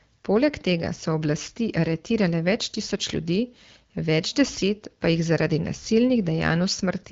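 No faults detected in the speech; the AMR wideband (HD Voice) path at 12.65 kbit/s is working as designed, with band-limiting to about 7.5 kHz and only light coding texture.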